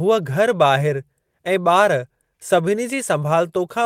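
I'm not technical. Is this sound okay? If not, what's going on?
No. There are two related timing problems in this speech.

The first is clock drift between sender and receiver. The device that recorded and sent the audio runs its clock roughly 4 percent slower than the device playing it back. The receiver therefore keeps running short of audio to play, and it has to stretch what it has to avoid gaps. This mismatch lasts for the whole clip.

The second is repeated timing corrections, which are how the receiver copes with that drift. From 0.22 s to 3.80 s it keeps inserting small repeated slices of sound. All of them push the same way, and they are spaced unevenly. Together they add about 150 ms and slow playback to 96 percent speed. You may hear this as slight hiccups or a faintly uneven, dragging pace.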